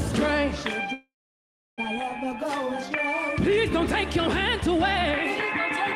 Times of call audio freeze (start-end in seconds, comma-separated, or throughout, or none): 0.93-1.80